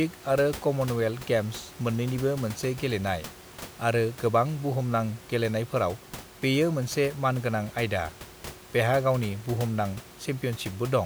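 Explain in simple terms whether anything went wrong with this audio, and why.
Nothing went wrong here; the recording sounds as intended.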